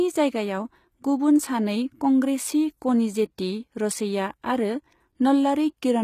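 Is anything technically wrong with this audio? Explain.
Yes. Throughout the speech there is plainly audible damage, likely from HE-AAC compression at a very low bitrate, on the order of 20 kbps. Only the lower spectrum appears to be truly coded. The treble is rebuilt by copying lower bands upward, so its harmonics don't line up with the real ones, and s sounds come out gritty and metallic. A spectrogram would show smeared, repeated-looking upper bands and a hard ceiling at 14.9 kHz, with nothing above it.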